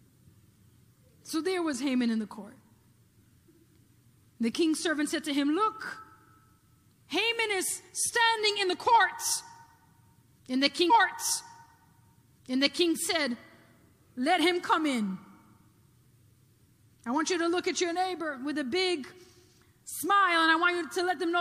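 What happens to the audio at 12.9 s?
A stream segment repeated ends at 12.89 s, after replaying from 10.89 s. The player queued the same segment twice, so about 2.0 s of audio plays again, with a small blip where playback jumps back, before the sound resumes moving forward.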